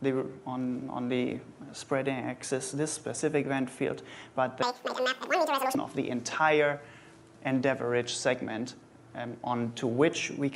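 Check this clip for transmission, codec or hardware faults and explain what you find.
There's one fault here, a wrong sample rate, from about 4.62 to 5.75 s. For that stretch the samples are played back at twice the rate they were captured at, with no conversion, which fits 24 kHz material going out at 48 kHz. Speed and pitch shift together, so the sound runs double speed and jumps up a full octave, 12 semitones, then drops back to normal right after.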